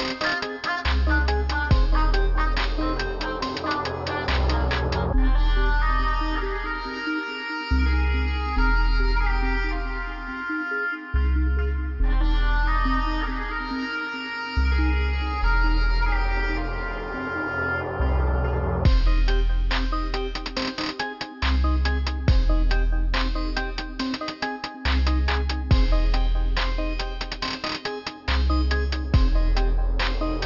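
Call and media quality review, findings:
Aliasing, throughout. Gritty, metallic edge on high-frequency content; spectrum runs hard up to about 6 kHz, then stops. Probable component: resampler with no anti-alias filter, consistent with a 48 kHz to 12 kHz downsample. Content above 6 kHz folds back into the band as unrelated tones, roughly 15 dB below the signal.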